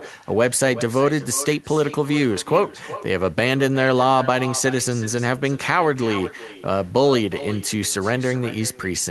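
From start to finish, every phrase is trailed about 0.4 s later by a fainter, thinner copy about 16 dB down. This is echo with no canceller: the far end's loudspeaker feeds its microphone, and that return comes back across the network unremoved.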